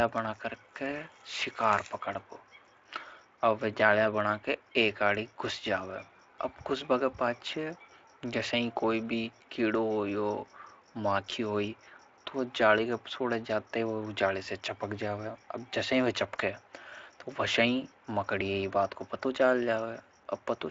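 No technical faults are audible.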